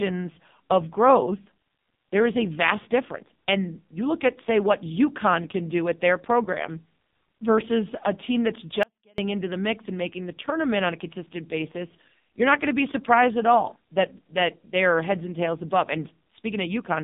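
AMR narrowband mobile codec, throughout: the speech passes only between about 150 Hz and 3.7 kHz, with nothing above, and the heavy buzzy, synthetic coloration from so few pulses per subframe fits a low AMR-NB mode near 5.9 kbps.

Audio dropout to a faint residue, 8.83 to 9.18 s: after "versus a team that's" the speech cuts off abruptly for 0.35 s, leaving only faint sound about 35 dB down, then returns at "into the mix and". The likely cause is a brief loss of signal while the path stayed live.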